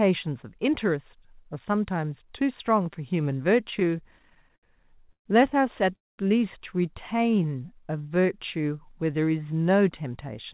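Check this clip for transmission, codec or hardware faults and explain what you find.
Three separate delivery faults occur from the middle of the speech onward, all in the receiving side's handling of late packets. The band stops at 4 kHz throughout, which fits a G.711 mu-law call leg at 64 kbps.

From 3.64 to 5.28 s the speech stutters and drags. It keeps catching on itself in about eighteen brief hitches, the longest 128 ms, with roughly a fifth of that stretch filled by held-over sound. These are repeated stalls (a stutter). Packets kept reaching the receiver later than they were needed, so its jitter buffer emptied over and over. Each time, the last bit of sound was stretched out until fresh audio arrived. Nothing is lost, but about 356 ms is added.

Between 5.96 and 6.20 s the sound halts. A short trailing fill gives way to about 210 ms of silence, and then the speech resumes exactly where it left off. 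This is a call audio freeze, likely caused by a packet hold-up on the network that drained the jitter buffer completely. The receiver bridged the wait, about 226 ms in all, and its playout delay grew by that amount.

From 7.17 to 8.27 s the speech slows to about 87% of normal speed while keeping its pitch. Sounds are drawn out. This is a jitter buffer slow-down. With its reserve running low, the buffer rebuilt it by repeating single pitch cycles and fragments of pauses many times in succession. That stretches the passage by about 147 ms without any gap.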